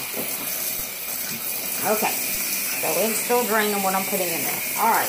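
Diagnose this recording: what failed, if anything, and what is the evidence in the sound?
A DC step, at the converter stage or from an input with an offset being switched in, is heard at 2.35 s. The zero line of the waveform jumps, and that gives a single low thump. The sound carries on unchanged across it. The offset then drains away through a 20 Hz high-pass, so the offset fades rather than holding.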